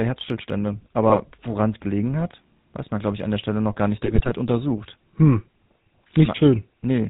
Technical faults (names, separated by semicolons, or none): GSM full-rate codec; GSM bit errors